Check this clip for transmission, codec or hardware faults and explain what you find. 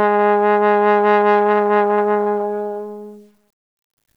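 One fault runs through the whole clip: low bit depth without dither. Quiet passages sound grainy and gritty, with a distortion that shifts as the sound changes, and the faintest tails sputter between steps or drop to silence. The cause is likely truncation to about 10 bits without dither, which leaves an error that tracks the signal, roughly 50 dB below it.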